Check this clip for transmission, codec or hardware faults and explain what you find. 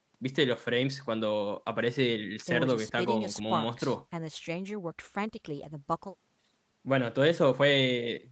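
Nothing faulty can be heard in the signal: the speech has the normal sound of a call link, with the lowest bass trimmed by the microphone processing and nothing above 8 kHz, which fits an Opus stream at a modest bitrate of around 20 kbps.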